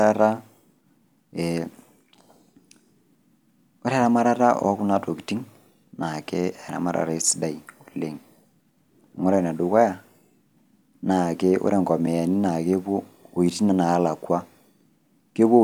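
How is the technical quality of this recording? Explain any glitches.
The recording has one clear glitch, a block of digital silence at about 12.06 s, right after "naake ore". For roughly 5.3 ms the speech drops to silence and then returns, with no fade on either edge. That length fits a 256-sample buffer that wasn't filled in time. A gap this short comes across as a tick or dip rather than as silence. On a waveform it shows as a near-flat line. A spectrogram shows a thin vertical gap.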